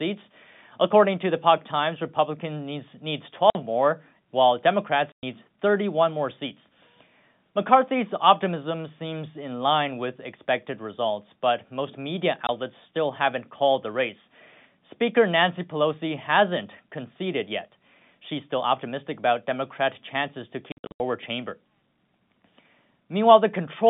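Hard-edged silent holes chop the speech at 3.5 s (50 ms, after "needs needs"), 5.12 s (110 ms), 12.47 s (20 ms, before "still haven't called the") and 20.72 to 21.0 s (scattered gaps totalling 240 ms, after "chances to"). This is packet loss filled with silence, with gap lengths that fit 10 ms packets.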